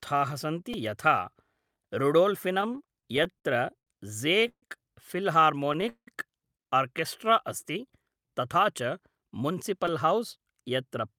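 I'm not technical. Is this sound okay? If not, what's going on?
No, the speech has several playback faults, all caused by audio arriving at the player unevenly or too late.

At 0.73 s and again at 9.88 s there is a repeated buffer. The player ran out of fresh audio and replayed the last tiny slice, twice at the first point and three times at the second. Each slice lasts only about 3 ms, which fits a 128-sample buffer, so it comes across as a quick click or brief buzz rather than an audible echo. That very short length is what separates it from the longer stutters below. Only a sliver of sound is lost, about 5 ms and about 10 ms.

From 2.61 s to 4.63 s come repeated stalls (stutter). The sound kept arriving late, so the player paused twelve times, stretching the last bit of sound to fill each gap. The longest gap is 138 ms, and together they add 378 ms, nearly a fifth of that stretch. Nothing is missing, but the speech drags and jerks in a series of small hitches rather than one single stop.

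From 5.89 s to 6.08 s there is a call audio freeze, likely caused by data being held up on its way. The last sound hangs and fades, and about 90 ms of it is actual silence. The speech then resumes exactly where it stopped, with nothing lost. This is one longer halt, unlike the string of short hitches earlier.

From 7.25 s to 8.04 s the jitter buffer slow-down makes the speech run at 93% speed without any change in pitch. The player built up a reserve by repeating tiny pieces of sound, adding 64 ms in total, so sounds are drawn out and can waver slightly. There are no stops or clicks here, only a smooth, sluggish stretching.

From 9.73 s to 11.13 s comes the opposite, a jitter buffer speed-up. The player had more audio stored than it wanted, so it trimmed tiny pieces, roughly a tenth of a second in all. The speech runs at 107% speed at the same pitch and sounds slightly hurried. It differs from the slow-down only in direction, rushing instead of dragging.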